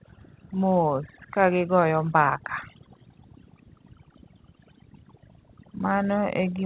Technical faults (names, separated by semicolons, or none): overdone noise removal; echo leak